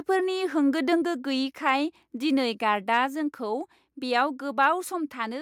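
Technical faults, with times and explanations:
1.02 s and 3.06 s, microphone volume stepped down: the level drops abruptly, by about 3 dB, then about 2 dB. This is likely automatic input gain lowering the microphone.
1.68–1.70 s, 2.94–2.97 s and 4.63–4.65 s, microphone overload: brief harsh crackle on peaks. Tops are flattened at the converter's limit, likely from input gain set too high.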